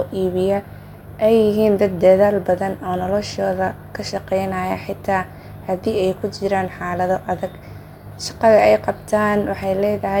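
No dropouts, distortion or other technical faults can be heard anywhere in the recording.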